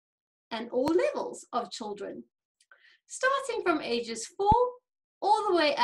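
Two loud pops land at 0.88 to 0.90 s and 4.52 to 4.54 s, each jumping roughly 15 dB over the sound, likely from a plug, switch or static discharge.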